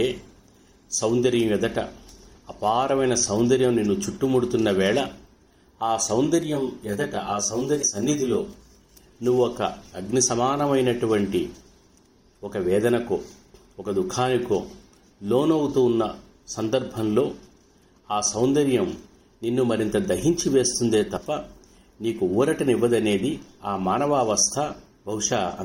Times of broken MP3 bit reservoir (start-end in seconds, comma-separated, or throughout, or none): 7.81-7.84, 21.16-21.18